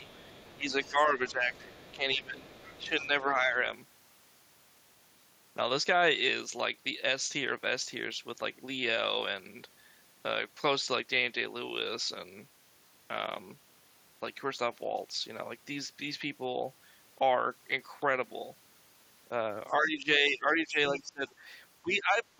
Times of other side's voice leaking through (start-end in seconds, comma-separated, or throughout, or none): 0.08-0.90, 1.30-2.16, 2.57-3.02, 19.68-19.73, 21.27-21.32